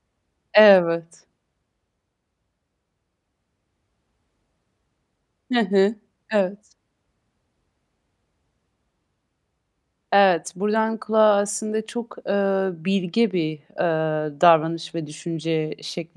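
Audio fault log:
No faults detected in the speech recording; nothing to log.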